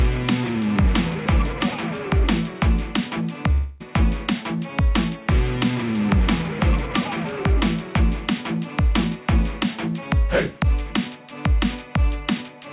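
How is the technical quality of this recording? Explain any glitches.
The recording has one clear glitch, a break in the sound from 3.52 to 3.83 s. The audio is also narrowband throughout, with nothing above 4 kHz, which fits a telephone-grade call codec such as G.711.

At 3.52 s the sound stops flowing and a long network dropout is the likely cause. Packets stopped arriving for about 0.28 s. The receiver filled that gap by stretching out the last sound it had, so you hear a smeared buzz or hiss rather than true silence. At 3.83 s the audio resumes, but the section that went missing never returns.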